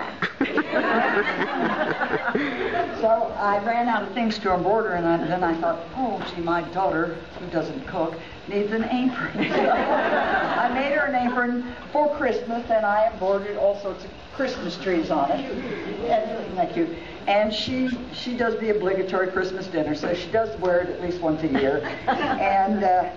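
A corrupt frame decoded at 17.87 to 17.95 s produces a brief burst of misplaced energy lasting about 80 ms, consistent with roughly two damaged frames in a row. Flipped bits inside the compressed data made the decoder misread gains and spectral codes, and it played the result instead of discarding it. Energy therefore lands at frequencies that do not belong to the sound, giving a short chirp-like blip that peaks at around -20 dBFS.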